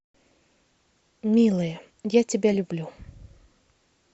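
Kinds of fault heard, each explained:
Frames out of order: two adjacent runs of frames were decoded in swapped order, so a brief stretch of speech plays with its halves exchanged and no time is lost. This is heard as a garbled flutter at 0.97 s (10 ms blocks) and 2.52–2.56 s (20 ms blocks).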